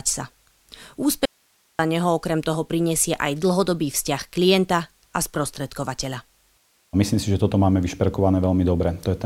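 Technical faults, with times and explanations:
1.25–1.79 s, audio dropout to a faint residue: the speech cuts off abruptly for about 0.54 s, leaving only low hiss some 40 dB below the signal, then snaps back in mid-flow. The likely cause is a brief loss of the wanted signal upstream while the later stages of the path stayed live and kept passing their own noise. Unlike a natural pause, the break has hard edges and steady hiss rather than room tone, and unlike a fade it has no gradual slope.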